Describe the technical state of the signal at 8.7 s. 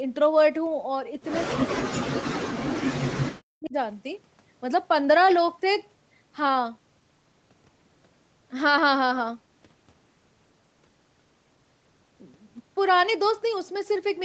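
At 8.7 s the speech is intact, with no dropout, glitch or distortion; its content stops below about 8 kHz, as expected for a normal call path.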